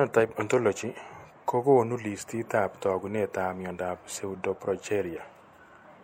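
From start to finish the speech carries a watery, swirly coloring, with the s sounds picking up a metallic chirp. That's likely MP3 compression: the encoder is starving for bits, so weak frequency lines blink on and off from frame to frame, and it trims the top end, with nothing above 18.5 kHz. The damage is plainly audible, which fits a bitrate somewhere around 64 kbps.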